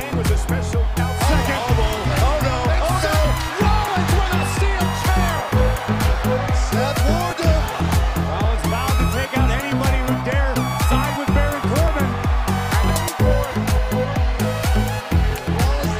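Two device clocks likely disagree by around 0.1 percent, causing clock drift buffer slips: a regular click every 1.14 s from 0.45 to 15.31 s.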